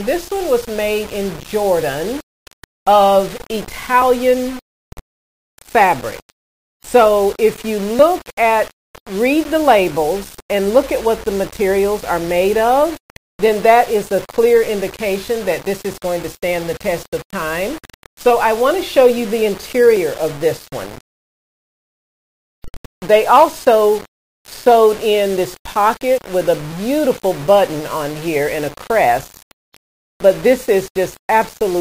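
The audio was likely requantized to about 5 bits by plain rounding without dither, so the error tracks the signal throughout. Grainy distortion sits roughly 20 dB below the sound, quiet passages turn gritty, and the faintest parts sputter or drop out.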